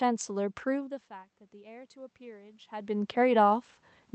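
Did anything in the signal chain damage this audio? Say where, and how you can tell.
Yes. The call processing's automatic gain rising is at fault: the input level fell by about 21 dB, as when the talker moved back from the microphone, and the gain control responded by slowly raising its gain by about 4 dB from 1.51 s to 3.47 s. Because it amplifies everything it receives, the voice and the room noise swell together over those two seconds rather than jumping at once.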